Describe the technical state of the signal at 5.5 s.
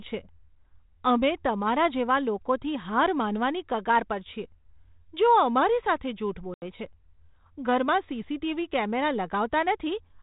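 At 5.5 s the speech is intact, carried by a G.726 ADPCM path at 32 kbit/s that leaves only light, band-limited coding character and no fault.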